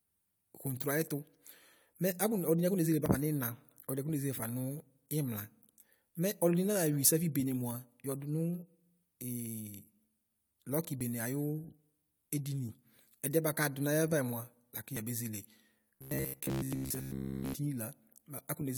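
At 1.08, 3.06, 7.05, 11.01, 12.99 and 14.97 s, overlap between stream segments trims milliseconds at 2 s boundaries: tiny skips, with waveform jumps and thin vertical spectrogram lines.

From 15.95 to 17.54 s a rigid 66.7 Hz metallic buzz, likely robotic sound from repeated 15 ms buffers, replaces most audio, drawing evenly spaced horizontal spectrogram stripes.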